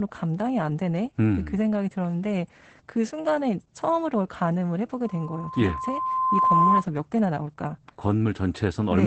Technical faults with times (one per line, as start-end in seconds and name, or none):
0.00-9.06 Opus voice compression
5.04-6.85 loudspeaker feedback squeal